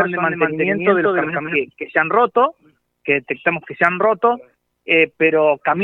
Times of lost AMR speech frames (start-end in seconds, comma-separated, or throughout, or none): none